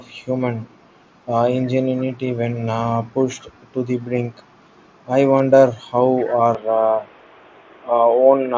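At 1.97 to 2.17 s, 4.42 to 4.47 s and 6.16 to 6.34 s, a faint copy of the speech trails the original by 224 ms: an echo leak, likely from a far-end loudspeaker whose echo canceller let residue through. It sits well below the speech, faintest at 4.42 s. The fixed delay marks it as a returned echo rather than room reverberation.

At 5.38 s comes a concealed Bluetooth headset packet loss lasting 15 ms. The receiver filled the gap by repeating recent waveform.

From 6.55 s to the end, the input likely switched to a poorer device. The band narrows, so the sound turns dull and boxy, and a new noise floor appears some 35 dB below the signal. There is no silence and no level jump at the switch, so only the change in tone and noise reveals it.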